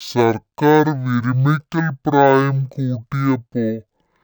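From start to finish, the speech plays at half speed and an octave low. This is stereo read as mono. Left and right samples were taken in turn as one channel. Everything drags and sounds deep, with a faint mirrored image high in the spectrum.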